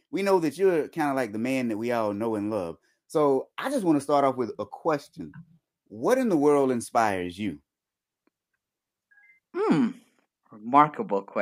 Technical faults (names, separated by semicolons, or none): none